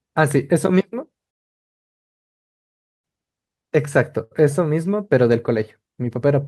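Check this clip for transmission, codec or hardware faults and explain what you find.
Two faults are present: a long playback stall and a brief stall from a late packet.

From 1.30 s to 3.05 s there is a playback stall. The speech stops mid-flow and the output goes completely silent for about 1.7 s before resuming. This likely happened because the player ran out of buffered data or its output thread was blocked. What sets it apart from a late-packet stall is the true silence and its length. Nothing is held or stretched. The sound simply cuts out and returns.

From 4.24 s to 4.33 s there is a short stall from a late packet. When a packet failed to arrive on time, the jitter buffer emptied, and the receiver held the last sound for 71 ms. Playback then continued from the same point, so nothing is lost, though everything after it sits 71 ms later. It is heard as a briefly prolonged sound with a slight buzz or dip, not as a gap of silence.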